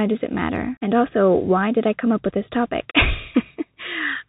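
From start to finish the speech passes through a Bluetooth CVSD headset codec, with plainly audible damage: nothing above 4 kHz, scratchy s sounds, a granular hiss beneath. Unlike a clean low-pass filter, loud high sounds overrun the one-bit step and crackle, fitting a 64 kbps link.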